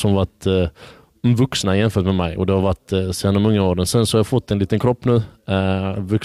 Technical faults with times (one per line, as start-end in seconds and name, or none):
0.00-6.24 hard clipping